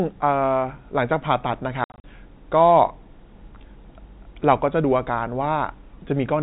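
Packet loss filled with silence hits between 1.84 and 2.04 s. About 140 ms of audio drops out across that 200 ms stretch, in holes up to 60 ms long that fit 20 ms packets. Each silent gap starts and ends abruptly, under the narrow telephone band of the G.711 coding.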